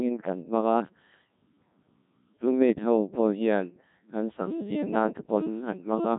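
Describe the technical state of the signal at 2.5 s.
At 2.5 s you're hearing the Codec 2 vocoder artefact, same as through the whole clip: the speech is rebuilt from sine waves using just pitch, voicing and envelope, so it sounds robotic and buzzy, heavily damaged, nothing above 3.8 kHz, consistent with roughly 1.6 kbit/s.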